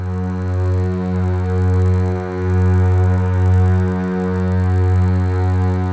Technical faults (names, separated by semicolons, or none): resampler restarted on every block